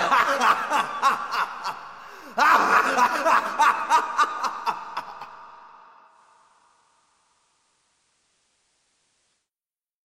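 At 6.04 s, digital radio blending to analogue: a 182 ms cross-fade to FM drops the level about 2 dB and brings faint hiss, until 9.50 s.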